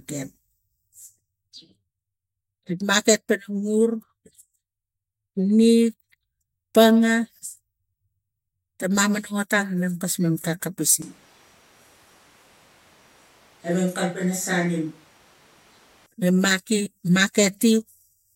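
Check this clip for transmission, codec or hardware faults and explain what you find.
One fault stands out: a switch to a distant microphone from 11.02 to 16.06 s. The speech abruptly turns roomy, hollow and thin, drops roughly 5 dB and gains audible background noise, likely because the close microphone dropped out. Reverberation and room noise, not just lower gain, distinguish it from a level dip.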